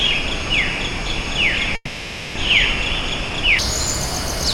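An everyday sound recording, its first 3.59 s running at the wrong speed: the section plays at 0.53 times its recorded rate, so everything is slowed and dropped roughly ten semitones, deep and dragging. Speed and pitch fall together, which sets this apart from a pitch-shift effect, where timing would be kept; a player or editor running the section against the wrong clock is the likely cause. From 1.75 to 2.39 s comes a long network dropout. The receiver stretches the last sound into a fading buzz for 620 ms, with a brief 30 ms gap of silence, and when audio resumes, 400 ms has simply gone missing and the timing has slipped by about a fifth of a second. That smeared, decaying fill followed by a skip forward suggests lost packets rather than a clean edit or mute.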